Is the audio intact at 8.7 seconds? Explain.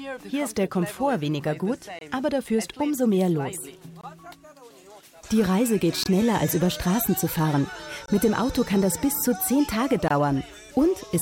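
Yes, the audio is intact at 8.7 seconds, with no fault present at that moment.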